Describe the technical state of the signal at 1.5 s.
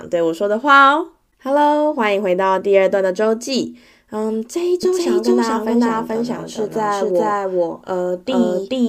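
At 1.5 s the speech signal is intact, with no audible technical fault.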